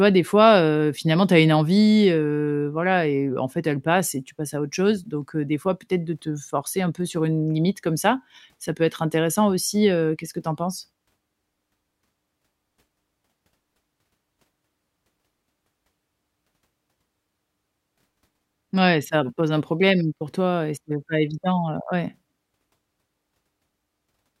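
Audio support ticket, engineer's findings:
No audible fault found in the speech recording. No component implicated and no mechanism to report.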